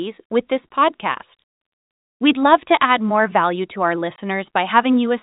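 Packet loss filled with silence at 4.16 to 4.18 s, right after "more value to our": a 20 ms stretch of the speech drops out to dead silence, which fits a single lost packet that the receiver replaced with zeros rather than concealing. The signal stops and restarts abruptly at each edge, so the gap comes across as a short hole with hard edges. Around it, the G.711 telephone band limit keeps everything below 4 kHz.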